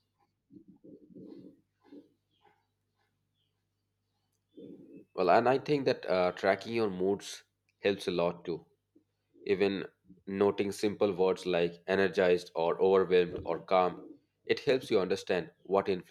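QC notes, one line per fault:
No technical fault can be heard anywhere in the recording, and the signal holds steady across its whole run.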